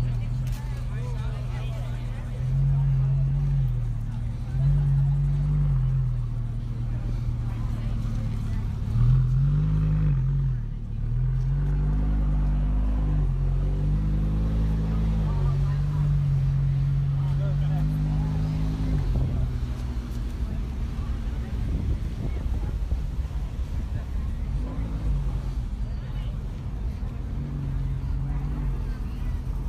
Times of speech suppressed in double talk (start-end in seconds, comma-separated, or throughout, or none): none